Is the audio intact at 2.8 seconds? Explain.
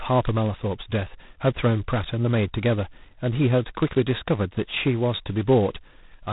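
No. At 2.8 seconds the speech carries heavy G.726 ADPCM damage, present across the whole clip. The coder sends only a few bits per sample describing the error of an adaptive prediction, and at this coarse a setting, which fits its lowest 16 kbit/s mode, the quantisation error becomes a harsh, rasping hiss that swells and fades with the speech level. On a spectrogram everything above 3.8 kHz is blank, with grainy noise filling the band below, strongest on loud syllables.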